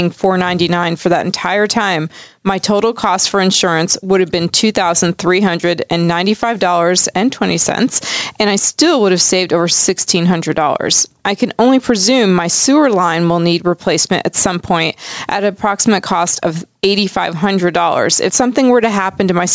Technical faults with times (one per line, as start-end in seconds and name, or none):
0.00-19.54 gain pumping